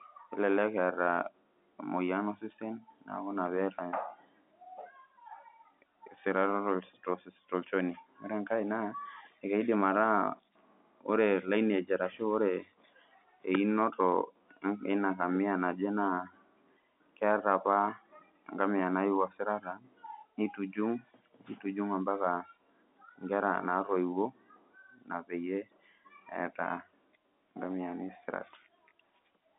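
Nothing stood out on listening to this telephone-band speech recording.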